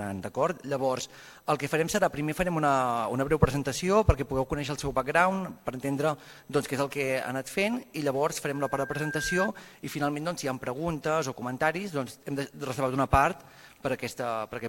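At 8.53 s a loudspeaker feedback squeal starts: a mic is hearing its own speaker, and the loop gain tips over one at 1.6 kHz. That tone swells over most of a second, peaking a few dB above the rest of the audio before cutting off at 9.49 s.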